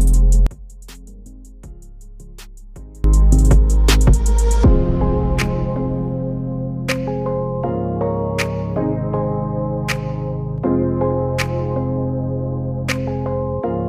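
From 0.47 to 3.04 s, one stereo channel has likely been inverted in polarity, so material shared by both sides cancels when summed to mono. This is the one channel inverted fault: the centred sound falls by about 25 dB, leaving only a faint residue of the channel differences.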